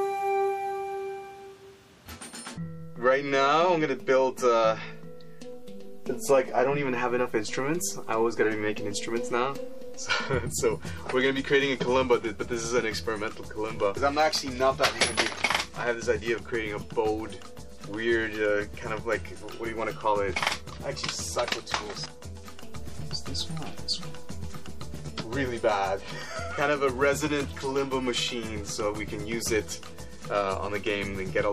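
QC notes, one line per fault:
Throughout, MP3 compression: the upper detail has a watery, swirling quality, with metallic chirps on bright, hissy sounds and blurred attacks. This is likely an MP3 encoder starved of bits, in keeping with a low rate near 64 kbps. It zeroes weaker frequency lines, which flicker in and out from frame to frame and produce the plainly audible swirl.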